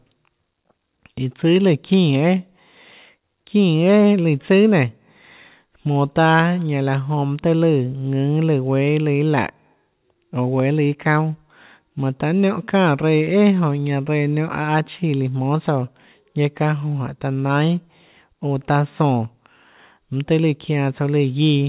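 A speech recording with no technical faults to report. It arrives over a mu-law G.711 telephone path sampled at 8 kHz, so the band stops at 4 kHz.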